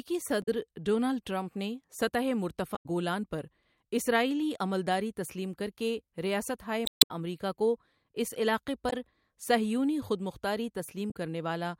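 Damaged data in a compressed stream breaks into the speech at 0.42–0.48, 2.73–2.86, 6.85–7.11, 8.89–8.93 and 11.10–11.16 s. Corrupted frames throw the decoder out of sync, giving short chirps or squawks that show as abrupt broadband smears or discontinuities on the spectrogram and waveform.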